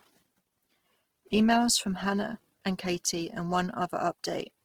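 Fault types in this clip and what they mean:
Opus compression: speech turns grainy and rough rather than swirly, with band energy kept but detail noise-filled, likely Opus music mode at roughly 16 kbps.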